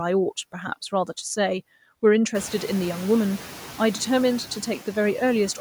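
Throughout the speech, noise suppressor artifacts are present. The suppressor estimates the steady background in each frequency band and pulls those bands down frame by frame, by about 10 dB. The background therefore sinks in the pauses and comes back up beneath the speech. This becomes plain once the room noise rises by about 21 dB at around two and a half seconds, where it sits about 17 dB under the speech. On a spectrogram, the noise floor darkens in the gaps and fills in under each phrase. The waveform's quiet stretches pump along with it.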